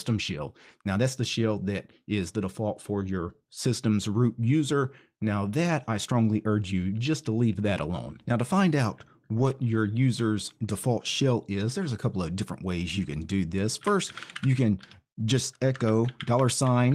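Speech, with a lost packet rebuilt from error correction between 9.37 and 9.51 s, after "to find out" and before "your user's default shell": roughly 80 ms of rougher, noisier frames, consistent with four packets restored from lower-quality redundant copies. On a spectrogram it appears as a brief grainy, smeared patch with no gap.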